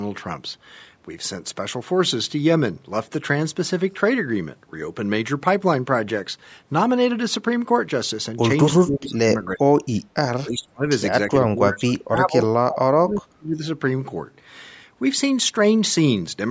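From 8.8 to 9.31 s, 9.47 to 9.82 s, 10.04 to 10.16 s, 10.43 to 10.86 s and 11.3 to 13.62 s, the speech ducks sharply, up to about 35 dB. That's likely speech suppressed in double talk, with the echo canceller mistaking the talker for echo.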